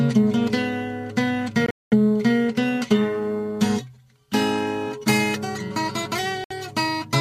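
Packets on a wireless link, likely Bluetooth, arrived too late to play and were discarded, giving two Bluetooth dropouts. From 1.66 to 1.93 s the output cuts out abruptly. Most of that is one silent stretch of about 0.21 s, with brief fragments breaking through. At 6.44 to 6.52 s a shorter hole of about 64 ms opens. Each time the sound resumes further along, as though it kept playing unheard.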